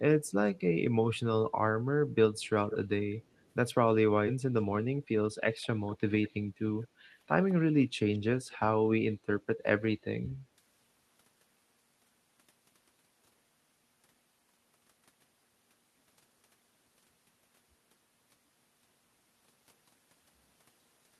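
Delayed copies of the speech return from 0.25 to 0.6 s, 2.39 to 2.77 s and 3.31 to 3.49 s. This is echo leak, likely from a far-end echo canceller letting its loudspeaker's sound through. The copies lag by about 0.19 s. The one at 2.39 s is loudest.

At 4.27 s playback skips ahead. About 0.7 s of speech is missing, and the two sides are joined directly.

From 4.37 to 5.40 s a jitter buffer speed-up runs the speech at 112% without changing pitch. Trimmed pitch periods remove about 150 ms, so it sounds hurried.

Echo leak returns from 5.62 to 6.31 s, 6.83 to 6.87 s and 8.14 to 8.19 s. The delay is near 0.2 s and the echo stays quiet.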